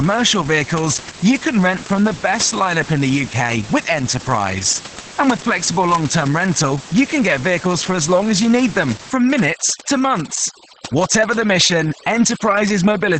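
From the start, the speech sounds muffled, hoarse and slightly robotic, with nothing above 8.7 kHz. This is heavy Opus voice compression: the SILK coder, limited to wideband, codes the excitation coarsely, which fits a low bitrate of about 10 kbps.

From 9.1 s, just after "as you need them", to the end at 13.2 s, the room noise, about 17 dB below the speech, drops and breaks up into twinkling specks. This is overdone noise removal, which cuts frequency bands near its noise estimate along with quiet parts of the voice.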